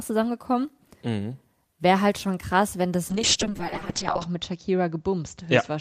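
At 3.11 s, right after "schon krass wenn das", a call bitrate drop sets in and lasts to the end at 5.80 s. The encoder starved of bits codes the speech coarsely, consistent with a fall from about 32 to 6 kbps, and cuts the audio band from 20 kHz to 8 kHz. The voice turns muffled and rough, worst for about 1.1 s.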